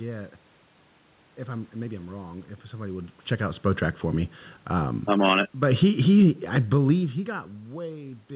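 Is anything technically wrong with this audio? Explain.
Yes. From 4.96 to 7.46 s the speech and the room noise behind it sink together by about 5 dB. This is automatic gain falling: the gain control judged the input too loud or its background noise too strong and eased its gain down over those two and a half seconds.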